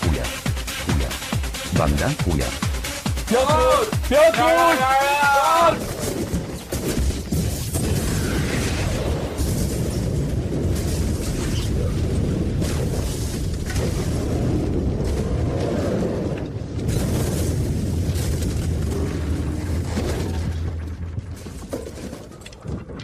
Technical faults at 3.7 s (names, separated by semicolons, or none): none